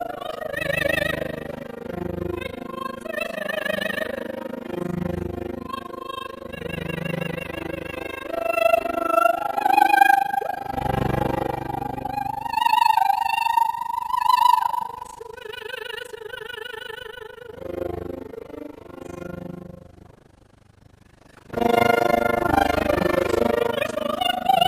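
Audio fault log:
throughout overlap-add ripple: Rejoined frames overlap unevenly, so the level swings by about 60 dB around 30 times a second, heard as fast flutter.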